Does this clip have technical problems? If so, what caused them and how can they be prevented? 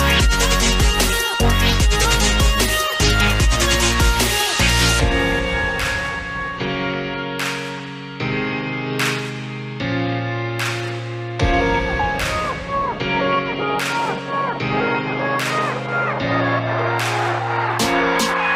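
No, there are no technical problems to report here.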